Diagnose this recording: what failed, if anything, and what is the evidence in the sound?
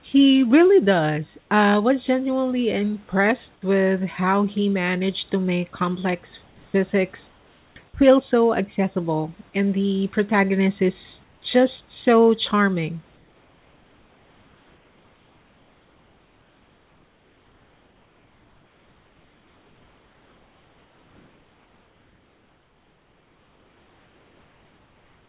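Comfort noise in place of the background, a call-processing fault: in pauses at 1.4–1.49 s, 7.28–7.76 s, 11.24–11.42 s and from 13.16 s on, room tone becomes flat, featureless hiss about 2–3 dB quieter. The likely cause is discontinuous transmission with synthesised fill. A noise gate would leave silence instead.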